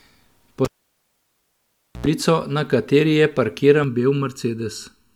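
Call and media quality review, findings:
Cable pulled and plugged in, 0.65–2.06 s: input cable disconnected while live, about 1.37 s open circuit. Pop at unplug, near silence, 87 ms burst of 60 Hz mains buzz as the tip reconnects, second pop as the speech returns just before "na kateri".

Channel delay (comb filtering), 3.84 s to end of clip: one channel lags the other by around 0.7 ms and the two are summed to mono. Shared content cancels at evenly spaced frequencies, first notch near 700 Hz, leaving the speech hollow and phasey.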